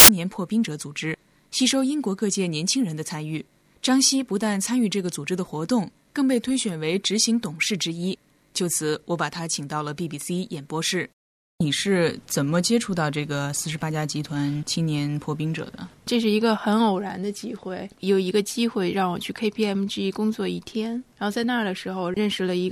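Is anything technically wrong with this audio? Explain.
Yes. From 0.00 to 0.09 s a hard-edged burst of very loud white noise opens the clip. This is file tags played as audio: an embedded cover picture, stored as compressed data, is being read as if it were samples, so its near-random bytes decode as loud static.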